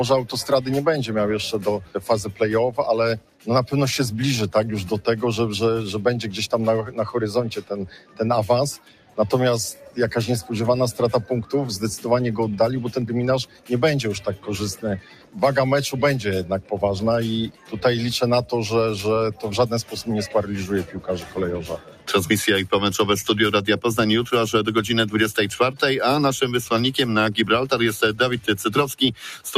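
From start to finish a noise suppressor meant for speech is working on this sound, treating steady tones and decaying tails as noise. Gain swings by around 10 dB, so sustained parts pump and thin out. On a waveform, the envelope dips between attacks. On a spectrogram, energy after each onset fades early.

Stronger cuts from the noise suppressor fall at 1.79–3.47 s, 6.85–9.97 s, 13.46–15.36 s, 16.62–17.73 s, 19.34–19.93 s and 20.84–22.08 s. Each one pulls held or fading sound down by about 9 to 12 dB for up to about a second. Onsets survive while sustains sink, and these show as dips in the waveform and spectrogram.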